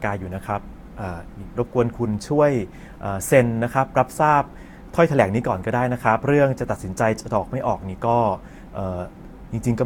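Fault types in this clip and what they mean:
generation loss: The speech sounds swirly and hollow, with smeared consonant attacks and nothing above 19.2 kHz, worse than one encode would give. It's likely been through a lossy codec about three times, which fits stacked Vorbis passes near 69 kbit/s.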